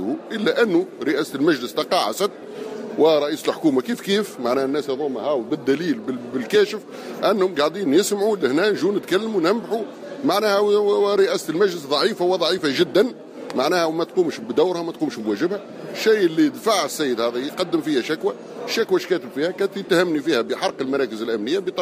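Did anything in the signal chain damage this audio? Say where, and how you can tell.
Yes. At the driver or buffer stage, the capture side likely failed to collect a buffer before the hardware wrote over it, a dropped buffer (overrun). The missing stretch is short, a few milliseconds, and the audio on either side is butted together with no gap. At 12.59 s this is heard as a jump where the sound skips forward abruptly rather than pausing, the mark of samples discarded instead of silence inserted.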